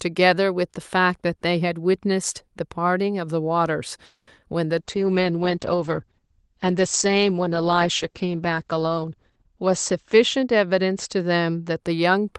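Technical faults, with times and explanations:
4.05 to 4.29 s, call audio freeze: the speech stops and the last sound carries on as a fading buzz or hiss, ending in about 30 ms of silence. The jitter buffer likely ran dry while packets were held up, so about 0.22 s of gap is inserted and nothing is lost.
4.79 to 11.86 s, call bitrate drop: the encoder's rate falls from 48 to 10 kbps, at its lowest for about 4.7 s, and the audio band narrows from 12 to 8 kHz. Coarser Opus coding makes the speech rough and watery, and the loss of top end muffles it.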